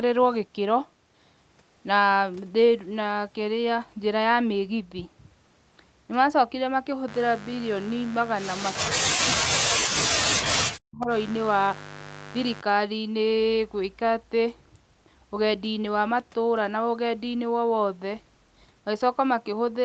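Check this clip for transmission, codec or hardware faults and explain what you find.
Two faults show up in this speech, both around the middle of the clip, while the call path's content stops at about 8 kHz.

From 8.62 to 8.72 s, a faint repeat of the speech arrives about 234 ms late, roughly 15 dB down. This is likely an echo leak: the far side's canceller let loudspeaker sound back through.

From 9.13 to 11.1 s, the talker's speech dips sharply, at worst by around 40 dB. The likely cause is speech suppressed in double talk: with both sides talking, the canceller turned down the wanted voice too.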